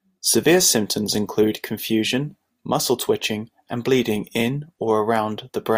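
Listening to this short speech recording, nothing technical stood out.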